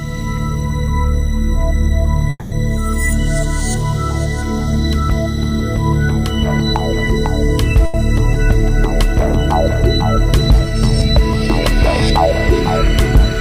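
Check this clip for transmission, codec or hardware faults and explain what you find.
Two transmission faults turn up here, both the kind where audio arrives late rather than getting lost.

From 2.30 to 2.55 s there's a call audio freeze. The last bit of sound gets carried on and fades for roughly 220 ms, dropping to a brief silence of about 20 ms before things pick up again right where they left off. Nothing's missing; it's just pushed back about 220 ms. The likely cause is packets held up in transit, leaving the jitter buffer empty until they showed up.

At 7.86 to 7.97 s there's a short stall from a late packet. One packet wasn't there on time, so the receiver stretched the preceding sound for about 80 ms until it arrived, then carried on from the same spot. You hear a sound hanging on a touch too long, and everything after it sits about 80 ms later than it should.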